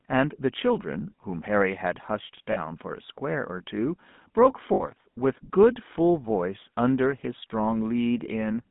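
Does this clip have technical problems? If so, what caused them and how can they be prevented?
Yes. The whole clip of speech carries the sound of the GSM full-rate codec. The line passes roughly 150 Hz to 3.6 kHz, which fits the 13 kbps GSM full-rate codec. That codec rebuilds the voice from a vocal-tract filter driven by a coarse, regularly pulsed excitation, so voicing turns buzzy and gravelly. On a spectrogram, nothing appears above 3.6 kHz, and the harmonics look smeared and grainy. To prevent it, carry the call over a wideband or modern codec such as AMR-WB or Opus.

There are also lost GSM frames at 2.52 to 2.59 s (about 40 ms, which fits two lost frames) and at 4.74 to 4.84 s (about 60 ms, which fits three). In each gap the decoder reuses the last good frame's settings, so the sound freezes into a short metallic ring. On a spectrogram a flat, repeated smear replaces the changing formants. 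To prevent this, strengthen the radio link or transport so fewer frames arrive corrupted.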